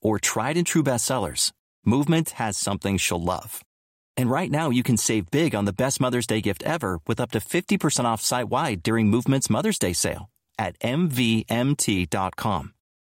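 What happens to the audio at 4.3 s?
Nothing goes wrong at 4.3 s; the speech carries on intact through that moment.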